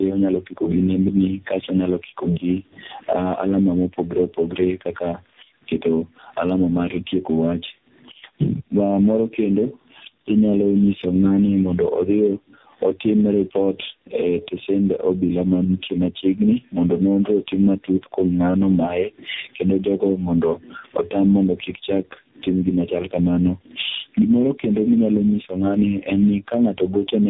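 Speech running the full length with two faults all the way through. The first is gain pumping: the level gets pulled down on every loud sound, swinging by something like 20 dB. That points to the mic gain likely being set far too high, with a fast limiter or compressor clamping down on every peak. Loud and quiet parts end up squashed close together. The second is tandem speech coding: nothing comes through above 3.8 kHz, and the speech has the stacked rough, muffled, warbly character that comes from one coder being fed another coder's damaged output. It sounds like three separate speech codecs in a row, consistent with narrowband AMR at both ends and an ADPCM-style link in the middle, with plain telephone PCM hops between them. The missing low bass is just the call's mic high-pass filter.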